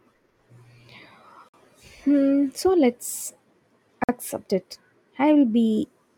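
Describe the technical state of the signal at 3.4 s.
At 3.4 s the speech signal is intact, with no dropout, distortion, glitch or other technical fault audible at that moment.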